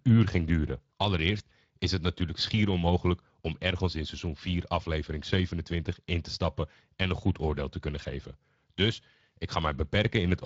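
Throughout, the speech sounds hoarse and grainy, the mark of the Speex codec starving its CELP excitation of bits, which fits a bitrate around 20 kbps.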